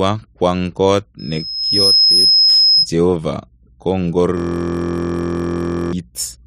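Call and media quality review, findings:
Loudspeaker feedback squeal, 1.19–2.89 s, starting after "kwang kot" and cutting off before "jehova kongor". A single 5.1 kHz tone swells over roughly 0.7 s until it sits around 5 dB above the speech. The probable component is the mic and speaker path. The mic re-captures the loudspeaker output, and loop gain above unity at 5.1 kHz lets that one frequency run away until the loop breaks.

System hang loop, 4.37–5.93 s, just after "jehova kongor". The speech freezes into a steady buzz at 43.1 Hz. A single 23.22 ms slice repeats exactly for the whole span, which fits a 1024-sample buffer. The probable component is the host or audio driver. The driver stalled while the sound hardware kept replaying the same ring buffer.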